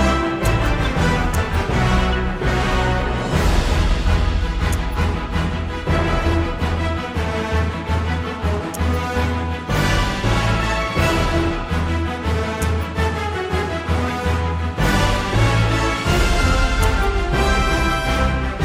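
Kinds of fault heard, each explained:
Corrupt frame decoded: a short, fairly loud chirp-like blip at 14.08 to 14.10 s, peaking around -15 dBFS. A couple of compressed frames arrived with flipped bits and were played anyway, so misread gains and codes put energy at wrong frequencies.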